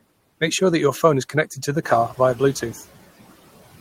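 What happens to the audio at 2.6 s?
At 2.6 s the noise suppressor is still catching up. Between 1.82 and 2.81 s the room noise steps up by about 10 dB around the 2 s mark, and the suppressor's noise estimate lags behind that jump. The louder background therefore passes with little reduction at first, then sinks over roughly a second as the estimate adapts and the cut settles at about 12 dB. At 2.6 s the background is still easing down.

A USB whine also runs through this moment, as it does through the whole clip. It is a steady, fixed-pitch tone at 8 kHz, well below the speech at around 40 dB down. The frequency points to the bus's 125-microsecond microframe rate, with current pulses leaking in through the power or ground. It sits as a faint, high, constant whistle behind the speech.

The ordinary noise suppressor artifacts are present here too, with about 14 dB of reduction applied band by band, frame by frame. 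Steady noise drops between words and swells back under them.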